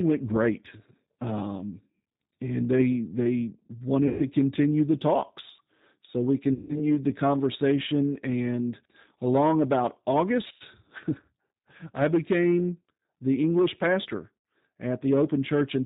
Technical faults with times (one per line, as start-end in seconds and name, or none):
0.00-15.86 G.729 codec
4.08-4.24 VoIP packet loss concealed by the speech codec
6.53-6.82 VoIP packet loss concealed by the speech codec
10.48-10.62 VoIP packet loss concealed by the speech codec
14.38-14.45 VoIP packet loss concealed by the speech codec